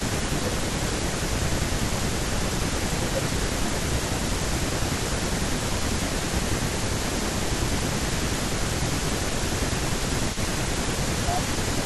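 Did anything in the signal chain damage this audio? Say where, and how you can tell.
Yes. Throughout the clip, from 0 to 11.85 s, a faint copy of the speech trails the talker by about 0.3 s, sitting roughly 10 dB down. This is an echo leak at the call-processing stage, most likely a far-end echo canceller letting loudspeaker pickup return.

The talker's level also sags in patches at 0.38 to 2.3 s, 2.79 to 3.23 s, 3.57 to 5.24 s, 5.86 to 8.67 s, 9.6 to 10.33 s (shallower) and 10.92 to 11.85 s, dropping by around 10 dB. This is speech suppressed in double talk, likely the canceller ducking its own talker along with the loudspeaker echo when the two sides overlap.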